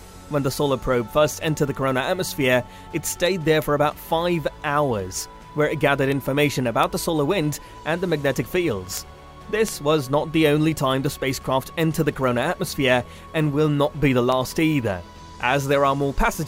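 Sharp ticks recur about every 0.4 s from 0.41 to 16.46 s. These are word clock ticks: an unlocked receiving clock slips one sample at each tick.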